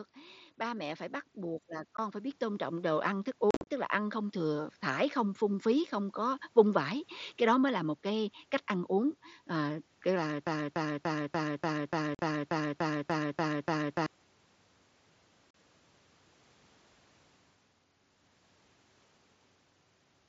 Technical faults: automatic gain rising; unconcealed Bluetooth headset packet loss; broken-record loop

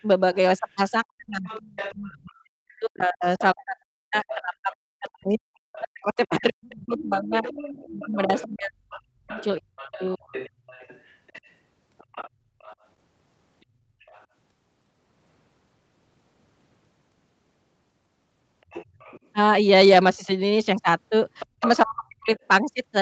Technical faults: other side's voice leaking through; speech suppressed in double talk; background gated by the echo canceller

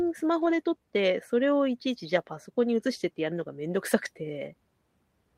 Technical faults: lost packet rebuilt from error correction

